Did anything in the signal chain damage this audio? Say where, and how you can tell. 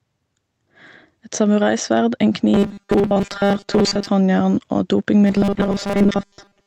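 Yes. Throughout the clip, gain pumping, most likely from a capture stage where the input gain is set too high and a fast limiter or compressor clamps down on each loud sound. Loud and soft parts sit closer in level, with the gain swinging by about 5 dB. On a waveform the envelope looks flattened, with the noise floor bulging between bursts. On a spectrogram the low-level noise band brightens and darkens in step with the speech.

From 2.54 to 4.07 s and again from 5.23 s to the end at 6.66 s, the speech turns into robotic sound from repeated short buffers, likely at the driver or buffer stage, where audio arrives too slowly and the last fragment is replayed instead. Most of each stretch is repetition, imposing a rigid 200 Hz buzz, which fits a loop about 5 ms long. A spectrogram shows evenly spaced horizontal harmonics at multiples of 200 Hz, while the waveform repeats identical short cycles. 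The call codec's roughly 8 kHz upper limit sits on top of both faults.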